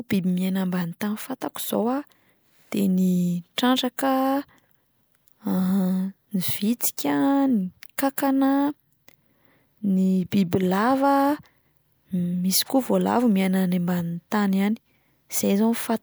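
No technical faults can be heard anywhere in the speech recording; the signal stays steady and intact throughout.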